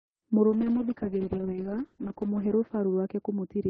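At 0.5 s a call bitrate drop sets in and lasts to the end of the clip. Before it, the Opus call path carries the speech with a top end reaching 12 kHz. From 0.5 s the encoder is starved of bits: coding turns coarse and rough, and the bandwidth narrows to 8 kHz, dulling sibilants. The degradation is consistent with a fall from 32 kbps to about 6 kbps, bottoming out for roughly 1.3 s.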